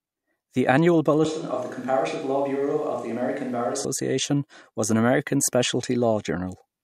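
From 1.25 s to 3.85 s the speech abruptly turns hollow and roomy, thinner in the bass and roughly 5 dB quieter, with room noise near 30 dB below it: likely a switch to a distant microphone. Unlike added reverb, the noise floor jumps too, and both edges are sudden.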